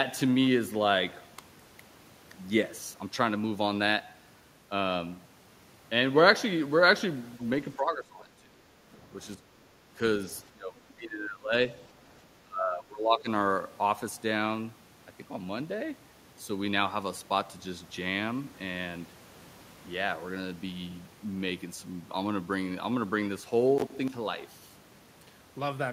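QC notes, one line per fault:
7.39–7.48 s, other side's voice leaking through: a brief, faint scrap of a second voice, roughly 25 dB under the talker, likely from loudspeaker echo the canceller missed. On a spectrogram it is a short, low-energy patch of separate harmonics, with barely a bump on the waveform.
7.76–8.67, 9.35–9.95, 10.51–10.78, 10.96–11.53 and 12.44–13.29 s, speech suppressed in double talk: the talker's level repeatedly dips by around 20 dB or more, likely because the echo canceller turned everything down while both sides spoke. The waveform envelope shows abrupt notches in those stretches.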